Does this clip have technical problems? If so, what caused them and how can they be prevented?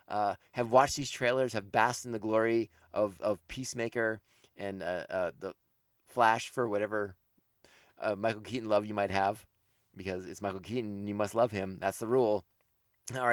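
No, this clip has no technical problems, so there is nothing to prevent.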